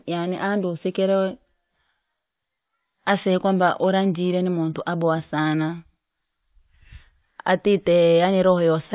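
No dropouts, clicks, distortion or level jumps are audible in the recording at any point.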